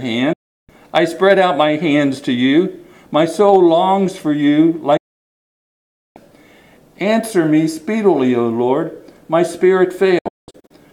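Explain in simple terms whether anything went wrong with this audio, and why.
A digital broadcast dropout cuts the sound to silence three times: at 0.33 s for about a third of a second, at 4.97 s for 1.2 s, and from 10.18 s in several short gaps. The receiver stopped getting good data and muted, so that audio is lost.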